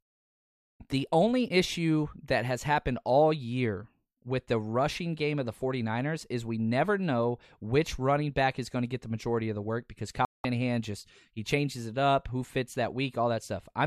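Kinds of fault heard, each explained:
Digital broadcast dropout: the receiver stops getting usable frames and mutes. After "of the work because" the speech cuts from 10.25 to 10.45 s, about 0.2 s, then resumes at "just he changes it". The waveform and spectrogram show a clean blank gap, with nothing sent during it recovered.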